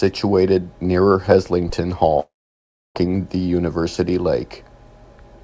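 Speech clip, heard down a call line with nothing above 8 kHz, which fits G.722 at 64 kbps. At 1.69 to 1.76 s there's a phantom power thump: supply switching on a live input pushes a step through the coupling caps, so you get a short, deep knock that dies away within about 15 ms. Then from 2.20 to 2.98 s there's what sounds like a long network dropout, most likely packets never arriving. The receiver keeps smearing the last sound into a fading buzz, then settles into about 0.66 s of silence, and when the audio resumes roughly 0.76 s of material is simply gone.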